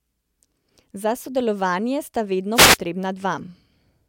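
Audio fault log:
2.54–2.78 s, wireless microphone noise hit: the radio link from the analogue FM microphone faded briefly as reflected signals cancelled the direct one at the receiver, so the receiver's own noise rose above the weakened carrier for about a quarter of a second. In the speech this comes through as a short swish of static, before the signal recovers and clean audio returns.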